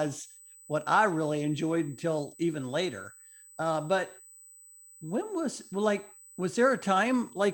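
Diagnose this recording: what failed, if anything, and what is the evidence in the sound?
USB whine in the analogue wiring: current drawn by the USB bus in its 125-microsecond microframes is leaking into the audio through the shared power or ground. The result is a steady, fixed-pitch 8 kHz tone running under the speech from start to finish, roughly 25 dB below it.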